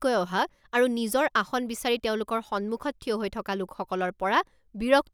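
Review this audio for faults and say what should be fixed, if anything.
Nothing here needs fixing; I listened to the speech and didn't pick up any technical faults at all.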